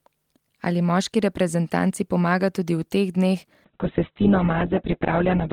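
Speech that turns rough and muffled from 3.65 s, just after "tudi v teh dneh", to the end: a call bitrate drop from 32 to 8 kbps narrowed the bandwidth to 4 kHz.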